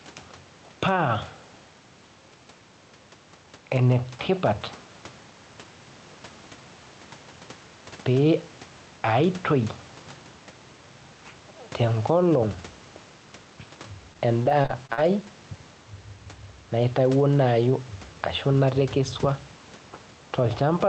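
Throughout the speech there is gain pumping: the level swings by about 5 dB, likely from a fast limiter riding an over-hot input. From 14.13 to 14.99 s, repeated packet loss makes the speech choppy and robotic. Several short holes, the longest 45 ms, are filled by stretching the preceding sound, which distinguishes it from a single dropout or plain clicks.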